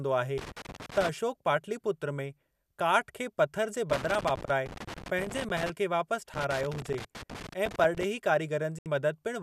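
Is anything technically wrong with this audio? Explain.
Yes, there are two separate problems in this speech recording.

Loose connector crackle occurs in three bursts: 0.38 to 1.09 s, 3.90 to 5.70 s, and 6.34 to 8.04 s. A worn or dirty contact in the signal path is making and breaking as it shifts, which chops the signal and adds pops from any DC on the line. The result is ragged, irregular scratching layered over the speech. Unlike a clean dropout, the audio is not muted. It sputters and crackles, and the timing of the bursts is uneven.

A digital broadcast dropout follows at 8.79 to 8.86 s. The receiver lost the digital signal or frames failed their checksum, and it muted until valid frames arrived again. What was transmitted during that 72 ms gap is gone, which is consistent with about three lost frames. What tells it apart from the crackle is the clean silent hole it leaves, with no scratching or pops.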